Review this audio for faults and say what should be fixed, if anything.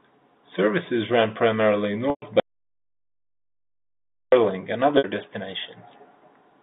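Right after "ran primarily", at 2.1 to 2.22 s, there's packet loss with pitch repetition: about 120 ms gone, bridged by repeating the last pitch period and fading it, so it fades into silence before speech returns with a short cross-fade. Another 60 ms gap at 4.98 to 5.04 s, both consistent with 10 ms packets. A jitter buffer with some forward error correction would help here.

Then from 2.40 to 4.32 s, still just after "ran primarily", there's an audio dropout to silence lasting nearly 2 s. The sound cuts to silence with no room tone, likely because the input device or link dropped while the recorder kept writing. Securing the connection and monitoring input levels during capture should prevent it.

The G.711 telephone band, roughly 200 Hz to 3.7 kHz, can be heard throughout.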